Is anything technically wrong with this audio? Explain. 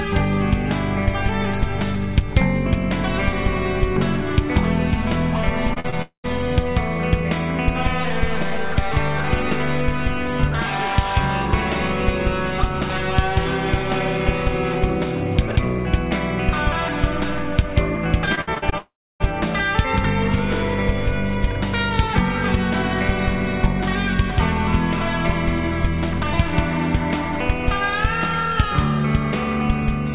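Yes. Several delivery faults interrupt the audio, heard through a call path whose band stops at 4 kHz, which fits G.711 mu-law at 64 kbps.

Short concealed packet loss occurs three times in quick succession: 5.74–5.78 s, 5.80–5.86 s and 5.90–5.94 s, each hole 20 to 40 ms. The receiver patched each gap by extending the preceding sound, then crossfaded back. The result is a brief smear or flutter. On a spectrogram, harmonics or noise run unnaturally flat across each patch. In the waveform, a short repetitive section shows at each point.

A long network dropout follows at 6.02–6.26 s and recurs at 18.78–19.22 s. The likely cause is a stretch where no packets arrived at all. In each, the last sound is continued as a fading buzz or hiss before giving way to silence, about 0.11 s of silence in the first and about 0.3 s in the second. The audio resumes with that material missing. A spectrogram shows a smooth decaying smear ending in a blank column. 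The waveform tapers to a flat line.

Repeated packet loss (robotic sound) spans 18.26–18.74 s, just before the second dropout. Six separate gaps, the longest 60 ms, were each filled by continuing the previous sound, so about a third of that half-second is synthetic. It sounds choppy, with fragments missing. On a spectrogram this appears as a stuttering pattern of flat, repeated slices. The waveform shows irregular chunks of looped cycles.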